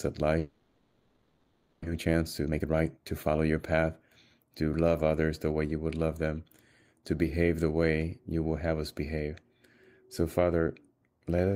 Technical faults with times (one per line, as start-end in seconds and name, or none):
0.39-1.88 long network dropout
1.90-3.61 jitter buffer speed-up